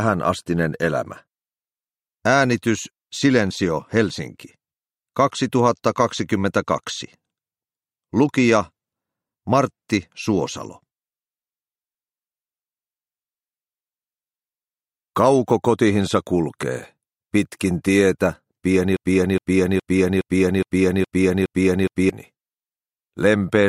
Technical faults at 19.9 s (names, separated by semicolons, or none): broken-record loop